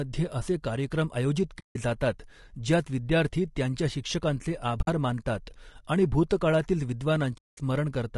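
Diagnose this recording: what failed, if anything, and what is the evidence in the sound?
Codec stage: the speech is rough and grainy throughout, with noise filling the gaps between harmonics and a thin, synthetic-sounding top band. The likely cause is low-delay AAC compression, AAC-ELD, whose short frames resolve pitch harmonics poorly, and the damage fits a low bitrate around 32 kbps.

Network or transport stage: AAC frame loss with muting leaves soft-edged gaps at 1.59–1.77 s, 4.81–4.88 s and 7.37–7.58 s, lasting roughly 160, 60 and 200 ms. The decoder zeroed the missing spectra, so overlapping windows fade out and back in, which fits 20 ms frames.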